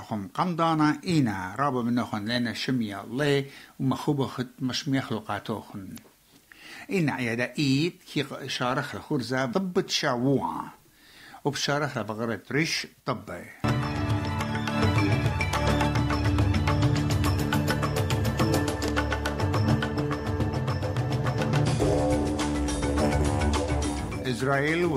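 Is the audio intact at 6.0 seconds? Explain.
No. Damaged data in the compressed stream runs from 5.94 to 5.99 s, ending right at the 6.0 s mark. Corrupted bytes there make the decoder misread the frames and lose sync while it hunts for the next frame header, producing a brief chirp or squawk.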